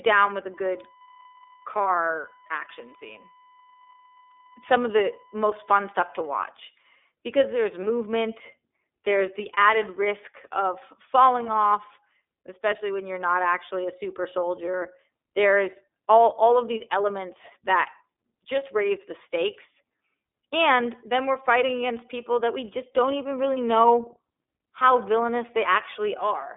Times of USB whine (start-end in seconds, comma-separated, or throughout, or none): 0.54-6.30